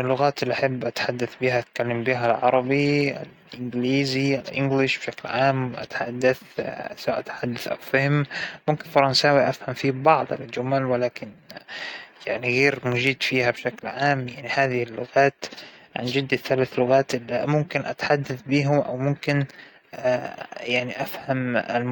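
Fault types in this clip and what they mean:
Repeated buffer: The playback device ran short of new audio and played its last block again instead, so at about 7.39 s one tiny slice of the speech plays three times in a row, with a hard join at each repeat. The slice is about 2.9 ms long, which fits a 128-sample buffer, so the repeat is a brief click or buzz rather than a stutter. Unlike a dropout, nothing goes silent and effectively no audio is lost.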